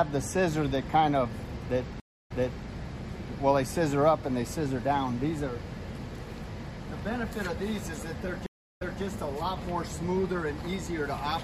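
At 2.0 s the audio drops out for about 0.25 s, then resumes 0.42 s earlier, repeating a stretch (to 2.66 s); at 8.46 s a 0.29 s gap returns 0.26 s back (to 9.02 s). Each is a stream reconnect: the connection broke, a fresh decoder restarted, and the server resent buffered audio.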